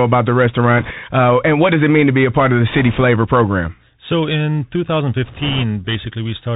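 The whole recording passes through a Bluetooth CVSD headset codec, whose one-bit up-or-down coding, consistent with a 64 kbps stream, cuts everything above 4 kHz and lets loud high sounds outrun the adapting step, so the speech is plainly muffled, s sounds turn scratchy, and a granular hiss sits underneath.

Bit errors on a Bluetooth voice link strike from 0.78 to 0.91 s, 2.70 to 3.02 s, and 5.26 to 5.64 s, flipping a few percent of the codec's bits. Because each bit carries little weight and the errors fade quickly, there are no sharp clicks, only bursts of rushing, crackly noise over the speech.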